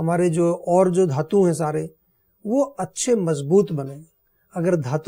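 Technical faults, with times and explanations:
No technical faults are audible anywhere in the recording.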